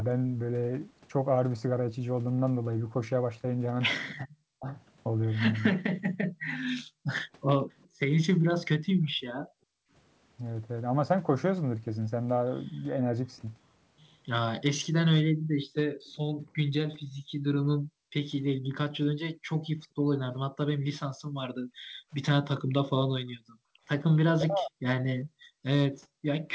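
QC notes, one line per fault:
4.25–4.67 s and 24.31–24.85 s, speech suppressed in double talk: the near talker's speech sinks by around 40 dB in pieces, about a fifth of a second in the first case and half a second in the second. This is likely because both sides spoke at once, and the canceller ducked everything. Unlike gating, it is speech itself, not room tone, that drops.
6.02–9.91 s, 15.31–23.84 s and 25.24–26.26 s, background gated by the echo canceller: room tone falls away by about 40 dB while the loudspeaker plays. The drops total roughly one and a half seconds, four seconds and half a second, and the tone returns when the canceller releases. Here only the background drops out, not the talking.
15.73–16.17 s and 19.83–19.87 s, echo leak: a faint copy of the voice trails 407 ms behind, about 30 dB down in the first stretch and about 40 dB down in the brief second scrap. It is likely residue the far-end canceller failed to remove. 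The copy is a distinct delayed repeat rather than a smooth reverberant tail.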